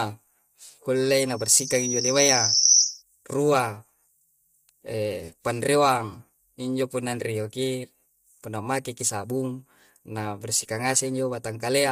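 From the start, the speech sounds rough and grainy, with noise between harmonics and a dulled top band. This is low-delay AAC compression, likely AAC-ELD at a low bitrate. From 0.96 to 3.02 s, a loudspeaker feedback squeal appears. A 5.8 kHz tone swells over about a second and a half, ending roughly 10 dB above the speech.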